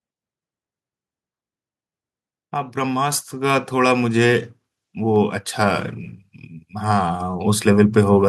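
At 3.12 s the microphone volume is stepped up: the call software judged the input too quiet and raised the device's capture gain by about 5 dB in a single move. Voice and room background jump louder together, with no fade. On a waveform the envelope widens abruptly at that instant and stays wider; on a spectrogram every band, including the noise floor between syllables, brightens at once from that point on.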